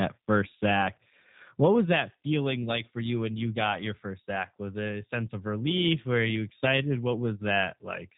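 Throughout the speech, the G.729 codec damage is plainly audible. The voice is rebuilt from a vocal tract model and a few pulses per frame, so it sounds rough and slightly synthetic, which fits an 8 kbit/s speech codec. Unlike a simple low-pass filter, it adds buzzy, artificial texture beyond the missing content above 4 kHz.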